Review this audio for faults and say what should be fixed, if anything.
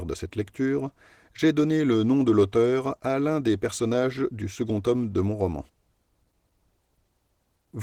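The speech is noticeably hoarse and slightly robotic throughout. This is Opus voice compression at a low rate. The lower band is coded by SILK linear prediction with a coarse excitation, while a thin CELT layer carries the content above 8 kHz. Too few bits are spread across the full band, which fits a bitrate around 16 kbps. To prevent this, encode at a higher Opus bitrate, or keep an uncompressed source.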